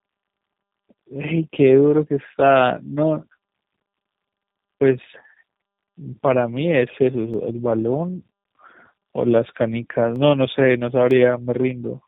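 Tandem speech coding runs through the whole of this speech recording: it sounds rough, muffled and warbly. This pattern fits a call that passed through a low-rate coder of the G.729A kind, was opened out to G.711 mu-law in the middle, then squeezed through the same low-rate coder again. The second coding pass works on audio already stripped and smeared by the first, so the damage compounds. Dropped samples show as single sharp clicks at 7.34, 10.16 and 11.11 s, each a thin vertical line across the spectrum. They are most likely caused by a fraction of a millisecond of samples going missing, so the waveform jumps straight to a later value. Each gap is far too short to remove any audible sound, leaving only a click.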